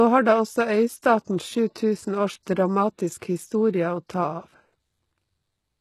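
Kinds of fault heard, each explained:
HE-AAC compression: treble above 12.3 kHz is missing, and the upper band sounds rebuilt from lower bands, giving gritty, lispy s sounds, likely from HE-AAC at a low bitrate.
Pre-echo: at 1.25 s a short hiss leads an attack by about 27 ms, where block-spread quantisation noise fills the quiet before the onset, softening it.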